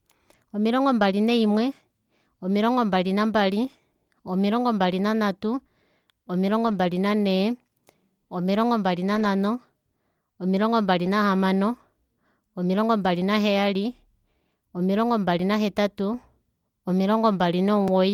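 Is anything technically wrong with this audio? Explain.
Yes. Four short spots in this speech show lost packets rebuilt from error correction, at 0.99 s, 6.67 to 6.77 s, 9.15 to 9.25 s and 11.05 s. The decoder filled each loss with the lower-bitrate backup copy carried in the next packet, so sound continues without a gap but turns briefly grainy and rough, about 20 ms at the single spots and 60 ms at the longer two. The waveform stays unbroken; a spectrogram shows smeared, noisier patches.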